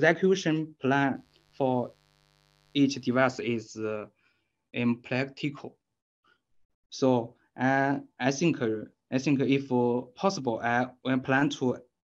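From 1.13 to 3.44 s there is mains buzz. Switching spikes twice in every 50 Hz mains cycle cause it. It sounds raspy and steady, roughly 40 dB below the sound.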